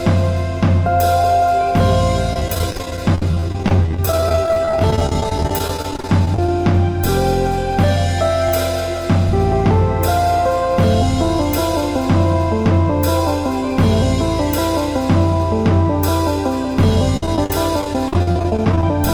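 From 2.33 to 6.49 s, and again from 17.17 to 18.83 s, repeated packet loss (robotic sound) chops the audio. Lost packets are concealed by stretching the preceding sound, so a quarter of each stretch is filler, giving a choppy stutter. A spectrogram shows smeared, repeated frame slices; the waveform shows dozens of short holes up to 30 and 53 ms.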